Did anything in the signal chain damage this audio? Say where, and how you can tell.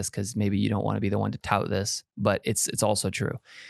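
No, nothing in the signal chain damaged this speech.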